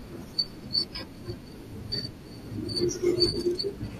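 A speech recording with two brief dropouts from AAC frame loss with concealment. At about 0.94 s a single lost frame, about 10 ms of audio, is patched with a smeared, phasey blip. From 3.30 to 3.35 s roughly 30 ms go missing, and the gap sounds smeared and noisy as the decoder rebuilds the missing frames from the last good spectrum with randomised phase. On a spectrogram both spots show blurred, noise-like columns where the harmonic lines lose definition; on the waveform the signal turns irregular. The short frames involved likely come from low-delay AAC, as used on video calls, and its light coding texture can be heard.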